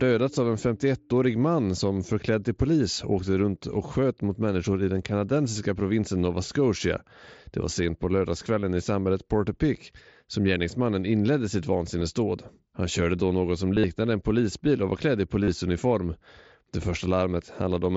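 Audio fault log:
8.61 s, 12.0 s, 13.75–13.84 s, 15.43–15.48 s: concealed Bluetooth headset packet loss. Voice packets on the mSBC headset link dropped, and the receiver patched each gap by repeating recent waveform. The short gaps near 8.61 s and 12.0 s last about 22 ms and 15 ms. At 13.75–13.84 s, where losses were scattered and the longest run lasted 45 ms, and at 15.43–15.48 s, the speech turns into a brief buzzy held tone with a slight warble as it resumes.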